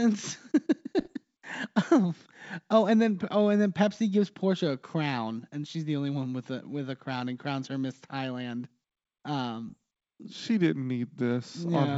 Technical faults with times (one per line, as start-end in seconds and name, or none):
0.99-1.14 bit errors on an ADPCM link
9.69-9.74 bit errors on an ADPCM link